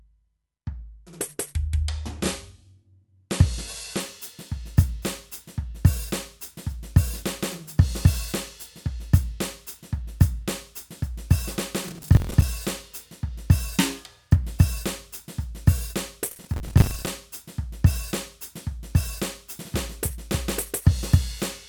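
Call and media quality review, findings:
Adaptive stream starting at a low bitrate, 0 to 4.0 s: music dull, nothing above 11.9 kHz, smeared codec artefacts. Player opened on a low rung, consistent with about 64 kbit/s MP3, then jumped to a cleaner one, fitting about 128 kbit/s. Sudden gapless step distinguishes it from a dropout or network stall.

Processor overload crackle, 11.88 to 12.42 s: gritty tearing over the music. Audio thread missing around 20 deadlines of roughly 10 ms buffers, replaying stale audio with hard edges. 16.31 to 17.07 s: same, longer, around 30 misses. Repeated old fragments and a clean stop, not a level-dependent distortion, separate this from clipping.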